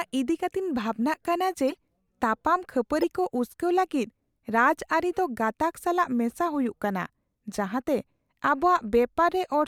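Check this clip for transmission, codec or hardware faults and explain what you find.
Two short bursts in the speech come from a corrupt frame decoded fault. At 1.70 to 1.77 s a run of a few damaged frames gives a quiet burst peaking around -25 dBFS, and at 3.02 to 3.04 s a louder burst reaches roughly -15 dBFS. Flipped bits made the decoder apply wrong gains and misread codes, placing energy at frequencies that don't belong there. Unlike concealment of a lost packet, which fades or repeats the sound, these add foreign noise.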